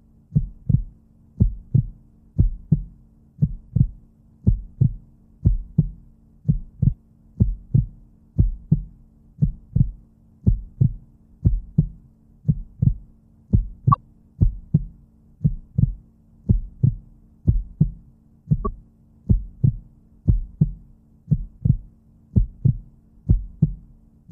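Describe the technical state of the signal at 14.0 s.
Just before 14.0 s, from 13.91 to 13.97 s, there is damaged data in a compressed stream: corrupted frames throw the decoder out of sync, producing a brief blip.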